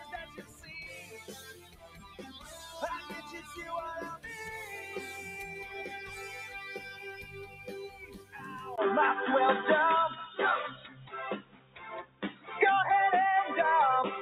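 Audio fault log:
Throughout: noise suppressor applied to music or sounds. A speech-tuned suppressor is still switched on and keeps mistaking steady parts of the sound for noise, so the level swings by something like 15 dB. Attacks get through, but sustains and tails sink and pump.
0.25–0.7 s, 1.02–2.5 s, 7.22–7.67 s, 7.89–8.38 s, 10.76–11.13 s, 11.4–12.5 s: sound cut by the noise suppressor. In each of these stretches the held or fading material gets pulled down by about 6 to 13 dB. The deepest dip is near 11.4–12.5 s.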